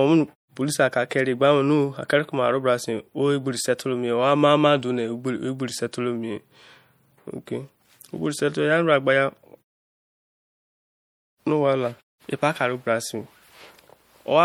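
MP3 compression damage runs through the whole of this speech clip, from start to finish, and it is plainly audible. Weak high-frequency detail flickers in and out between frames, giving a watery, swirly quality, with metallic chirping on s sounds and smeared consonant onsets. The likely cause is an encoder starved of bits, consistent with a rate around 64 kbps. The silent pauses between phrases are a separate effect from the compression.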